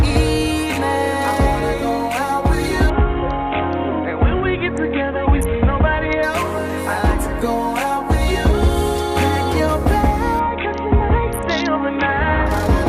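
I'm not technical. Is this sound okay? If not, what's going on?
No. Twice, from 2.9 to 6.2 s and from 10.4 to 12.5 s, there is a Bluetooth SBC bit pool drop: the wireless link got crowded, so the phone sent far less detail. The highest sounds vanish, everything turns dull, and a gritty roughness creeps in until quality returns.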